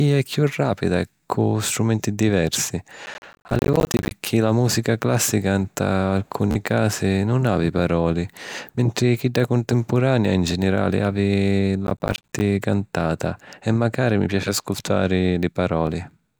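From 3.06 to 4.11 s there's processor overload crackle on the speech. The processor kept missing its deadlines on buffers of roughly 10 ms, dozens of them, each dropping out as a tiny hard-edged silence, so you get a gritty tearing that clears once the load passes. The same thing returns from 11.87 to 12.41 s, right after "contempurania in ginirali havi", with fewer misses.

Between those, a Bluetooth stutter hits from 6.51 to 6.55 s, between "la mùsica clàssica nta" and "casi nun havi palori". About 40 ms went missing, which fits a few lost packets, and the receiver replayed its last slice as a quick buzzy repeat before jumping ahead. A smaller one at 15.87 s, after "macari mi piaci ascutari", loses about 13 ms, consistent with a single packet.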